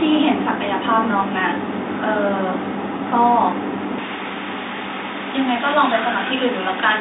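From 3.98 s to the end, the speech turns thin, bright and hissy on its sibilants: pre-emphasis left on. The treble lift applied for transmission, shaped like a J.17 curve and rising about 11 dB at 10 kHz relative to 1 kHz, was never undone by the matching cut. Within the telephone band, which stops near 3.8 kHz, the upper range is too strong. Unlike a lost low end or plain narrowing, the lows stay present while the highs are exaggerated.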